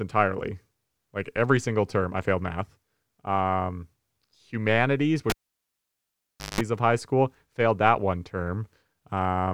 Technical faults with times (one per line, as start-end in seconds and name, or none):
5.30-6.61 cable pulled and plugged in